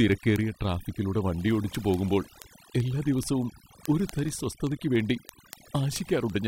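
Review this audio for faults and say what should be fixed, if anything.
Overdone noise removal runs through the whole clip. The background drops and breaks up into twinkling specks. The reduction was set so hard that any frequency band close to the noise estimate was pulled down or cut out, and quiet parts of the speech went with it. Unlike low-bitrate codec artefacts, the specks follow the noise floor rather than the loud content. To prevent it, use a gentler reduction setting and leave some residual noise.

Word clock ticks run from 0.12 s to 6.44 s, well over a hundred in all at a steady rate of about one every 50 ms. Each tick marks a single sample being dropped or repeated as the receiving device's free-running clock slips past the sender's. That rate fits a clock mismatch of roughly 500 ppm. Dropouts leave gaps and vary in timing, but these ticks are short and evenly spaced. To prevent it, lock the receiving device to the incoming digital clock.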